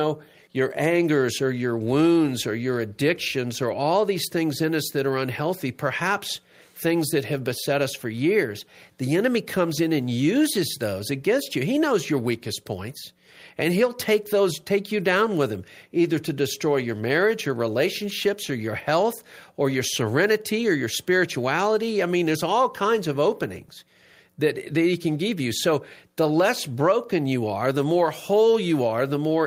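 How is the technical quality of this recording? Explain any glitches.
Listening through the recording, nothing stood out as a technical glitch.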